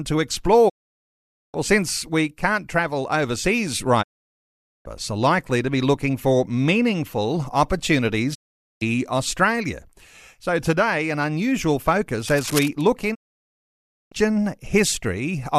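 Digital broadcast dropout interrupts this speech recording four times, at 0.68 to 1.56 s, 4.01 to 4.87 s, 8.33 to 8.83 s and 13.13 to 14.13 s. Each time the sound fades out over about 20 ms and stays silent for roughly half a second to a full second while the receiver mutes on corrupted frames, so that stretch of the broadcast is simply gone. Cable scratch noise appears from 12.27 to 12.68 s as a dense, uneven rustling burst sitting around 10 dB below the speech, likely from a worn connector or cable being moved so its contact resistance fluctuated.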